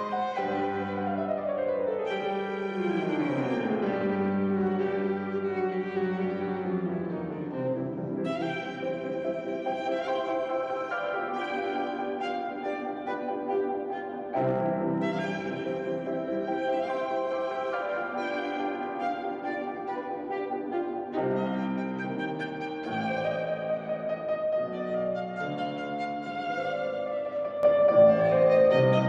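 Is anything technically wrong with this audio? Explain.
Yes. At 27.63 s the level suddenly steps up by about 10 dB and stays there to the end. This is a sudden gain jump, most likely a digital gain setting applied between one sample and the next with no ramp. What sets it apart from a louder passage or a gain-riding processor is that the background noise rises by the same amount at the same instant and there is no gradual swell.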